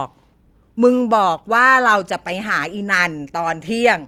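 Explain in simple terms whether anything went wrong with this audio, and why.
Nothing went wrong here: the speech comes through steadily with no dropouts, glitches or other problems to point to.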